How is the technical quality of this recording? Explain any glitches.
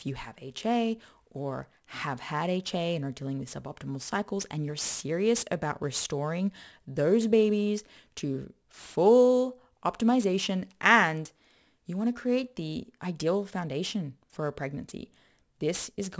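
The big issue is aliasing, and it runs through the whole clip. High content above 8 kHz was never filtered out, so it folds back down to unrelated frequencies, roughly 20 dB below the speech. That fits a drop to a 16 kHz sample rate, and it makes sibilants sound gritty and metallic.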